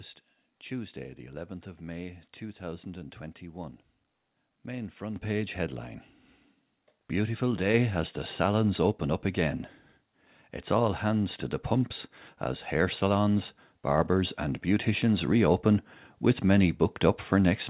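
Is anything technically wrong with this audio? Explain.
Yes. There are three microphone volume step-ups in this speech, at 5.16 s, 7.74 s and 13.98 s, each a sudden jump of about 9 dB, 4 dB and 3 dB. The call software seems to have judged the mic too quiet and pushed the device's input gain up in one go each time, so the voice and the room noise behind it get louder together, abruptly, with no fade. The sound also tops out around 4 kHz, which points to a narrowband G.711-style call path.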